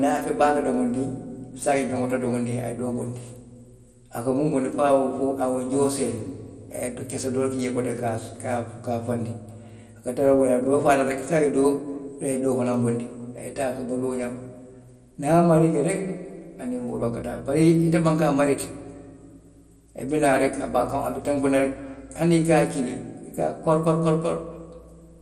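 Throughout the speech there is plainly audible coding damage, likely MP2 compression at a rate consistent with about 64 kbps. Nothing is present above 14.3 kHz, upper sub-bands switch in and out, and the coarsely quantised remainder gives a dull, gurgling, granular texture.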